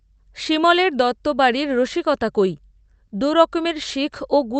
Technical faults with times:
none

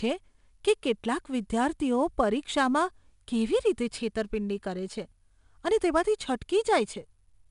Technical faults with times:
0.00-7.50 4-bit ADPCM compression

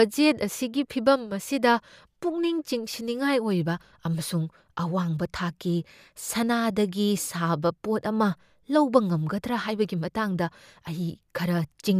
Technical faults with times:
none

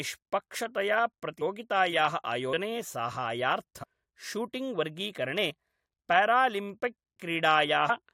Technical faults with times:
3.82-3.84 compressed frames skipped

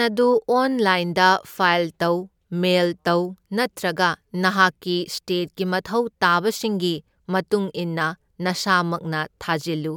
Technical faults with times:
none

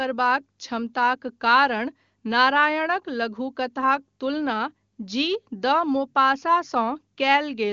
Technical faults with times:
none

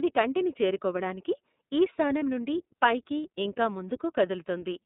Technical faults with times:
0.00-4.85 iLBC codec
2.19-2.23 lost iLBC frames

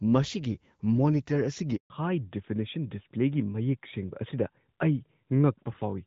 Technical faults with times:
1.76-1.90 handover gap
1.90-6.07 fallback to narrowband

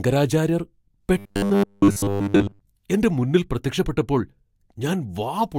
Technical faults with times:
1.18-2.61 robotic sound from repeated short buffers

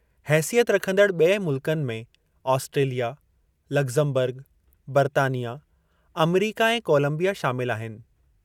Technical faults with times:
none

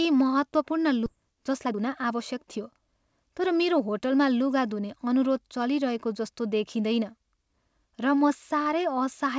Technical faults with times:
1.06-1.08 skip ahead
1.16-4.02 jitter buffer speed-up

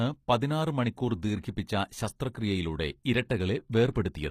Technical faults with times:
0.00-4.30 HE-AAC compression
1.41-1.44 pre-echo
3.92-3.96 pre-echo

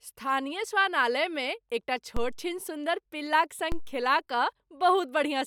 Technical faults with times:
2.17 DC step
3.72 DC step

